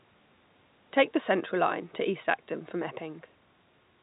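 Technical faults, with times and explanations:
No faults are audible anywhere in this recording.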